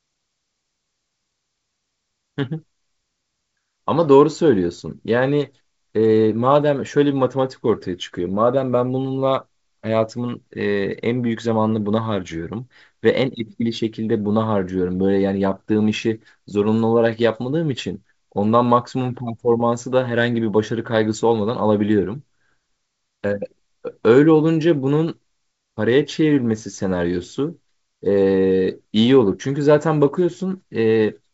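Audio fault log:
No faults are heard in this speech clip. It passes through G.722 wideband telephone coding at 64 kbit/s, which leaves the speech clear up to about 7 kHz with at most a faint trace of the coding in the upper band.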